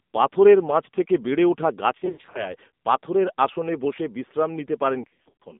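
From start to finish the speech carries the AMR narrowband mobile codec, here at 7.4 kbps. It sounds buzzy and synthetic because the low bitrate forces a coarse vocal-tract model. A spectrogram shows energy only between 200 Hz and 3.6 kHz, with a hard ceiling and nothing above.

Lost AMR speech frames start at 1.98 s, after "পাথরের মাঝথেকে বেড়ে উঠা", and last until 2.54 s, before "পাথরের আসনে বসে বিশ্রাম". About 200 ms of audio goes missing in scattered runs over 360 ms, the longest 60 ms. The decoder repeats the last pitch and spectral shape at falling gain, so the sound warbles and dips. In a spectrogram this appears as frozen, smeared harmonics, and in the waveform as sagging amplitude.

More lost AMR speech frames follow from 5.02 to 5.43 s, after "পাথরের আসনে বসে বিশ্রাম". About 240 ms goes missing across 380 ms, again in runs of at most 60 ms. The result is the same stuttering warble and fading, visible as flattened, briefly stretched harmonics and uneven envelope drops.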